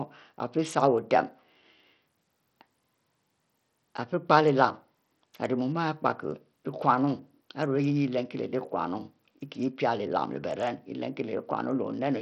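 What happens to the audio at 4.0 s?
Bluetooth SBC compression is the likely cause of what is heard at 4.0 s and throughout: starved upper sub-bands leave gritty, flickering treble with aliasing, and nothing above 16.6 kHz.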